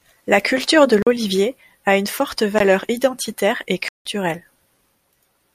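Speech in which output buffers apparently went unfilled, leaving blocks of digital silence at 1.02–1.07 s, 2.59 s and 3.88–4.05 s, each heard as a hole.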